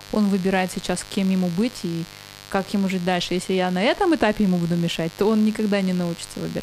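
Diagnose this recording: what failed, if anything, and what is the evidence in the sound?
Mains buzz in the analogue wiring runs under the speech throughout, a raspy 50 Hz buzz roughly 20 dB down, showing as evenly spaced harmonic lines stacked to several kHz on a spectrogram.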